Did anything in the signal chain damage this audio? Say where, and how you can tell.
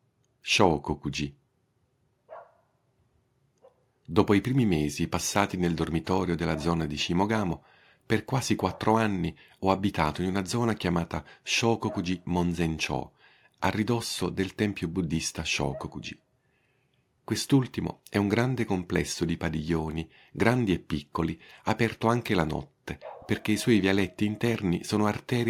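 No, nothing in the chain audibly damaged this speech.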